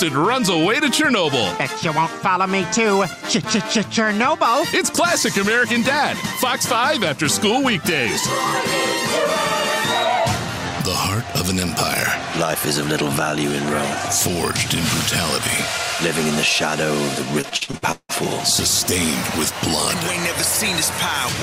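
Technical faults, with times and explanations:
13.68–13.82 s: loud pop, two sharp pops in quick succession, about 10 dB above the sound, likely a voltage step from a switch or static discharge.
17.41–18.11 s: repeated packet loss (robotic sound), seven holes, longest 174 ms, each patched by extending prior sound, so about half the stretch sounds choppy.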